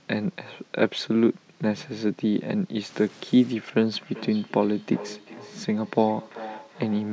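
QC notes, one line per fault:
2.86–3.53 s, stuck bit: For about two-thirds of a second the sound turns distorted, with a gritty distortion that follows the waveform rather than sitting on top of it. Any low-level moments in this stretch fill with a hiss. This pattern likely comes from one data bit stuck at a fixed value in the converter or a data line, so roughly half the samples land off by that bit's weight.
3.97–7.13 s, feedback echo between two devices: From just before four seconds to the end, each phrase returns at an interval of roughly 0.4 s. The repeats sound thinner and more ringing than the original, reaching about 16 dB below the main speech. A second device in the same room is playing this call back into the microphone, and the echo canceller can only remove its own playback. The loop's delay fixes the interval between repeats, and each pass through the loudspeaker and room strips body from the sound. 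Above this, the call's microphone processing band-limits the whole clip to nothing above 8 kHz.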